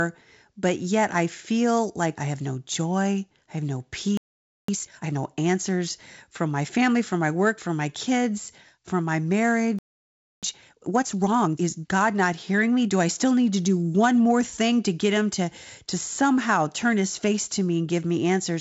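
At 4.17 s, just after "joy I have no", the speech cuts out for about 0.51 s in a playback stall: the output falls silent in mid-flow and then resumes where it left off. The likely cause is that the player ran dry of buffered data or its output thread was held up. From 4.68 to 5.18 s comes a time-compressed catch-up. The player trims its backlog by dropping short slices and cross-fading the joins, so the speech leading into "answers from my family" plays at double speed with its pitch unchanged.

The same pattern repeats after "my kids from my". A second stall silences the output from 9.79 to 10.43 s, about 0.64 s. A catch-up at 1.5 times speed then runs from 10.43 to 11.71 s and sounds hurried over that stretch. Throughout, the G.722 wideband path carries speech up to about 7 kHz, with the light upper-band hiss of that coding.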